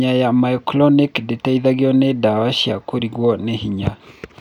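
Nothing in the speech stood out as a technical problem on listening.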